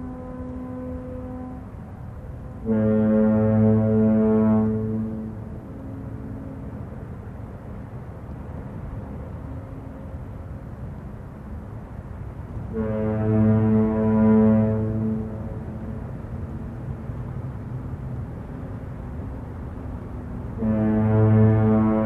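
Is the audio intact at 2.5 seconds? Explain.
Yes, at 2.5 seconds the audio plays through intact, with no dropout, glitch or distortion at that point.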